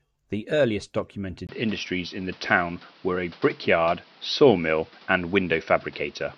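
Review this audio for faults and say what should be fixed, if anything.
From 1.47 s to the end the speech becomes duller and narrower, with nothing above about 5.9 kHz. A gap of about 20 ms marks the change, the level moves by roughly 5 dB, and a new noise floor appears around 30 dB below the speech. This is likely an input switched to a poorer device, a second microphone or a headset call profile with a narrower band and its own tone and noise. To prevent it, lock the recording input to one device for the whole session.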